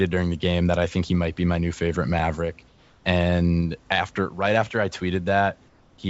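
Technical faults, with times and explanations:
2.19 s: block of digital silence. A 2.67 ms hole where the signal drops straight to zero and returns with no fade, so it is heard as a single tick rather than a gap. Each edge is an abrupt step in the waveform, which produces the click. A dropout this short, 128 samples, fits an output buffer that was not filled in time, leaving that block as zeros.
2.68 to 3.04 s: comfort noise in place of the background. For 360 ms the room background, which sits about 33 dB below the loud parts of the speech, gives way to a steady, featureless hiss about 3 dB quieter. The texture of the real room drops out and comes back when the sound resumes. This is likely the call's discontinuous transmission stopping during a pause while the receiver fills in synthetic noise shaped like the background.
5.68 to 5.98 s: comfort noise in place of the background. The same substitution occurs for 300 ms. 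Here the background sits about 35 dB below the loud parts, and it is again replaced by smooth, uniform noise about 3 dB lower. The change in character is audible as a brief flattening of the ambience, which ends when the real signal returns.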